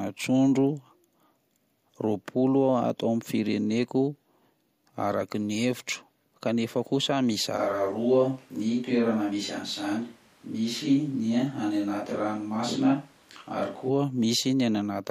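At 7.59 s the speech turns roomy and hollow without warning. The bass thins out. The level stays about the same. A faint background noise sits well below the speech. This is a switch to a distant microphone. The likely cause is that the close microphone dropped out, and a mic further from the talker took over. At 13.88 s the close sound returns just as abruptly.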